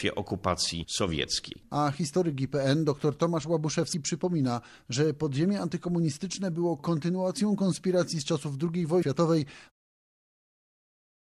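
Damaged data in a compressed stream shows up at 3.90 to 3.94 s and again at 8.99 to 9.03 s. Each time, corrupted bytes in the encoded stream throw the decoder off, so it misreads the frames there, loses sync and hunts for the next valid frame header. Each event is a brief glitch of about 40 ms. The second comes just before the smooth fade-out that runs from around 9.5 s to 9.72 s.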